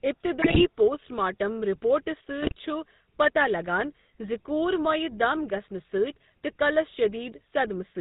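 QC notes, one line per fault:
Throughout: GSM full-rate codec, plainly audible at 13 kbps. Pulse-driven vocal-tract model gives buzzy, gravelly speech; spectrogram shows nothing above 4 kHz and coarse harmonics.
0.41–0.66 s and 2.40–2.52 s: GSM bit errors. Corrupted filter, pitch and gain values cause squawks and gargling; waveform shows level bursts, spectrogram smeared frames.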